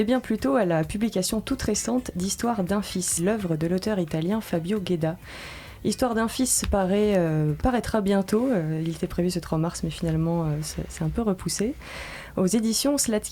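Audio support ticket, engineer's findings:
Stream segment skipped at 3.17 to 3.23 s: audio jumps forward with a short blip at the join. Likely the player failed to fetch one stream segment and carried on with the next, so that chunk of programme just isn't there.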